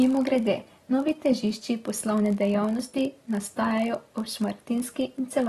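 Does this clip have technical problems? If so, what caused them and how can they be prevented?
Yes. A buffering stage writes blocks slightly shorter than the 1,024 samples the next stage reads, so each block is padded with a brief stretch of zeros. This block size mismatch (padded) puts a steady 46.9 Hz buzz under the speech throughout, and the speech runs at 0.999 times normal speed. Matching block sizes between writer and reader prevents it.

The speech is also dull and smeared, with a warbling texture and nothing above 12.5 kHz for the whole clip. This plainly audible damage is likely from AAC compression, which fits AAC-LC at a low bitrate around 37 kbps. Encoding at a higher bitrate prevents it.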